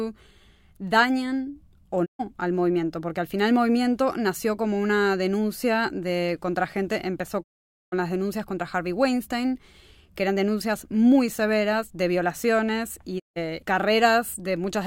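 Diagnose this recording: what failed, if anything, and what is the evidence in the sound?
The receiver lost the digital broadcast signal, or its frames failed checksum, and it muted until clean frames returned. Each digital broadcast dropout fades to silence over about 20 ms. The first runs 2.04 to 2.21 s, after "dañan o", losing 128 ms. The second runs 7.42 to 7.94 s, after "de contra gente empezó", losing 480 ms before "denuncias contra". The third runs 13.18 to 13.38 s, after "severas de violaciones y", losing 160 ms. These lengths fit whole 32 ms frames being discarded.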